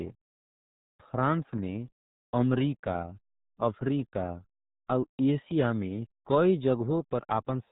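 From start to finish the speech runs through what sounds like the RealAudio 14.4 codec, the old RealAudio 1 dial-up format. Nothing gets through above 3.8 kHz, so everything's muffled and boxed in, and the damage is heavy, with the vowels turning gargly and smeared as the coder squeezes everything into a tiny data budget. That level of mangling points to a bitrate down around 8 kbit/s.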